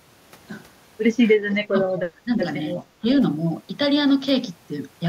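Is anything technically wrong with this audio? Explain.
Yes. From 1.5 to 1.56 s there is an echo leak: a faint copy of the speech arrives about 333 ms late and about 20 dB down, likely from a loudspeaker echo the canceller missed. It shows as a weak repeated pattern on the spectrogram.

Speech is suppressed in double talk at 1.7–1.92 s, 2.09–2.43 s and 3.01–3.05 s, likely because the echo canceller turned down both sides while they overlapped. The speech dips by roughly 20, 15 and 10 dB, seen as notches in the waveform envelope and faded bands on the spectrogram.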